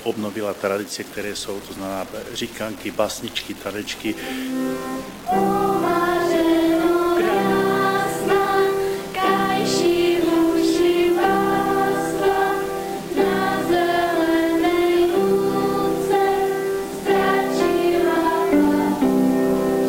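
The whole clip has gritty, signal-following distortion roughly 20 dB down, with quiet parts sputtering: low bit depth without dither, likely truncation to about 5 bits.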